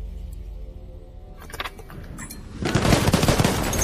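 MP3 compression runs through the whole clip. The sound is plainly watery and swirly, with a dulled top end and smeared attacks. This is likely lossy encoding starved of bits, consistent with roughly 64 kbps, where the encoder drops the treble and lets weak frequency lines flicker from frame to frame.

Compressed frames skipped at 1.09 s and 2.89 s. At each point whole frames of 26.1 ms never reach the output, so the audio jumps forward, by about two frames (around 50 ms) the first time and about four frames (around 100 ms) the second. Overlapping neighbouring frames turn each join into a brief smeared blip rather than a sharp click.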